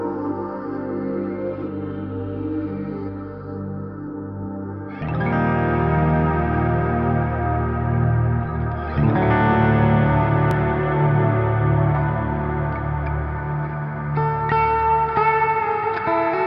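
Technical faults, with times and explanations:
10.51 s, dropped buffer (overrun): an abrupt forward jump, likely samples overwritten before being read, splicing the audio across roughly 15 ms of lost material.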